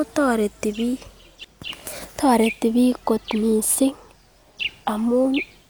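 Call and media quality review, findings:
Nothing to flag on this speech recording; no problems turned up anywhere, so there's nothing to chase on this one.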